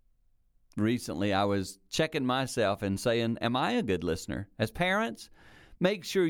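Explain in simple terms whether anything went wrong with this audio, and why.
Nothing went wrong with this audio, because no fault can be heard anywhere in it.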